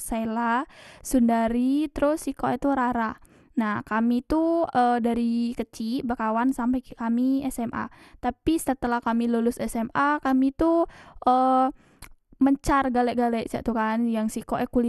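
From start to end, the speech carries a dull, gurgling, granular texture. Nothing reaches above 12.2 kHz. The upper range flickers in and out, and what remains sounds coarse and grainy. The likely cause is MP2 compression at a low bitrate, around 80 kbps. This MPEG Layer II coder divides the signal into sub-bands and rations bits among them. Short of bits, it shuts off upper bands and quantises the rest crudely.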